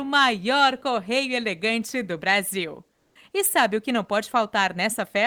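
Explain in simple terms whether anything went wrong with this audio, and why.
From 2.95 to 3.15 s, the real background drops out and is replaced by a flat, featureless hiss that is slightly quieter. This is comfort noise in place of the background, likely because the sender stopped transmitting during the pause and the receiver filled the 200 ms gap with synthetic noise.

At the end of that gap, from 3.13 to 3.15 s, the sound starts abruptly, without its soft beginning. This is an onset clipped by the voice detector. The detector was likely slow to notice the sound returning, so about 20 ms of its start was never sent.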